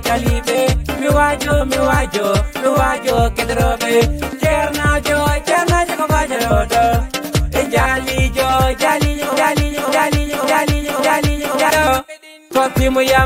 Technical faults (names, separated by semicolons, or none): broken-record loop